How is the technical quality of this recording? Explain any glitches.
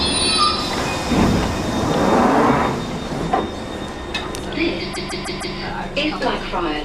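The recording has one glitch, a stutter from repeated frames between 4.93 and 5.55 s. A block of about 157 ms plays again four extra times in a row. This happens when a run of compressed frames is written or sent more than once, so the decoder replays the same slice of audio. The block length fits a run of roughly six frames. The sound loops briefly in place, and the repeats add about 0.63 s to the clip.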